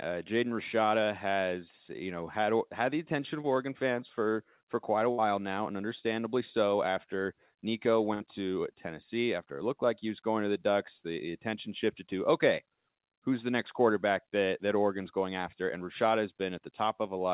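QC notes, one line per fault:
3.42–3.45 s, short concealed packet loss: just after "had had the attention" the speech briefly smears, a quick wobble rather than a clean gap. A packet arrived too late to be decoded, so the receiver continued the preceding sound for about 13 ms to cover the hole, then blended back into the real signal. About 20 ms of the original speech is gone, which is enough to blur a short consonant.
5.11–5.20 s and 8.14–8.22 s, burst of packet loss: each time the speech freezes into a brief held buzz or fading hiss, then jumps ahead. At 5.11 s it falls between "for for quite a" and "now and understandably so". Several consecutive packets were lost, so the receiver extended the last sound and faded it down, for about 66 ms and 59 ms respectively. Roughly 60 ms of real speech is missing at each point, and the dull, band-limited G.711 call sound with nothing above 4 kHz carries across the gaps.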